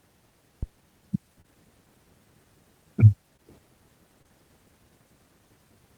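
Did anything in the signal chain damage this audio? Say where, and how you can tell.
Yes. A deep thump at 0.63 to 0.79 s, dying away within about 36 ms, is a phantom power thump: a supply switched on or off on the live input, with the voltage step passing through the coupling capacitors in the analogue wiring.

Brief smears at 1.41, 3.36 and 4.22 s are short concealed packet loss on the network. Roughly 20 ms never arrived each time, and the receiver filled the gap by extending the preceding speech.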